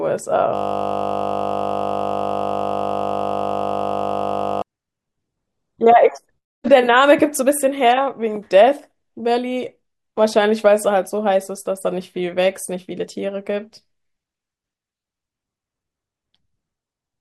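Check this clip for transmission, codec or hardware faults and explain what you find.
One fault is present: a system hang loop in this speech clip, running from 0.55 s to 4.62 s. The host or audio driver stalled while the playback hardware kept reading the same ring buffer, replaying a 20 ms slice of audio roughly 200 times in a row. Because the loop is so short, the repetition fuses into a steady buzz at 50 Hz, which points to a 20 ms buffer, replacing the speech for about four seconds.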